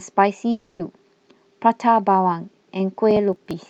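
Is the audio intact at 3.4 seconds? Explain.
No. At 3.4 seconds the speech sits inside a burst of processor overload crackle running from 3.11 to 3.66 s. Roughly ten buffers of about 10 ms each miss their deadline and are skipped, leaving hard-edged gaps heard as gritty, tearing crackle over the speech.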